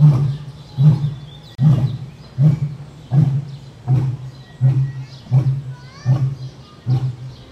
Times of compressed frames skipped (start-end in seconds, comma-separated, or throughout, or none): none